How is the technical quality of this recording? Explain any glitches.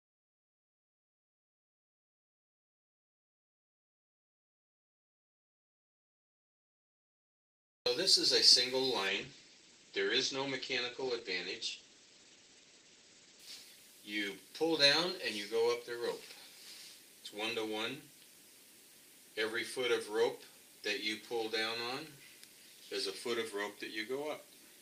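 Quality degrades for a stretch midway through. From 9.09 to 14.47 s, a call bitrate drop starves the encoder, roughly consistent with a fall from about 40 to 15 kbps. Audio bandwidth shrinks from 20 kHz to 8 kHz, so the sound turns muffled and coarse for about 4.3 s.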